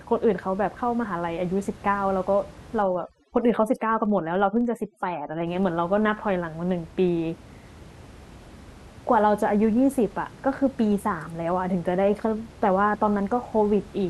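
Right from the start and all the way through there's a filter restarted on every block: it drops its state each block, leaving a low buzz near 23.4 Hz, which fits a 2048-sample buffer. From 2.82 to 5.47 s, overdone noise removal strips the room noise, normally about 22 dB under the speech, down to twinkly near-silence.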